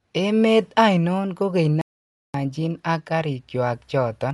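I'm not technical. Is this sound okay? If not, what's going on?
No. The speech sounds dull and rough throughout. Nothing above about 11.4 kHz comes through. This is likely heavy Dolby Digital compression squeezing the sound.

At 1.81 s, just after "ainon kogeny", the sound stops dead for about half a second until 2.34 s. That is a playback stall. The player was likely starved of data.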